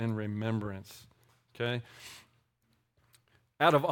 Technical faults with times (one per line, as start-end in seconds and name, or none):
none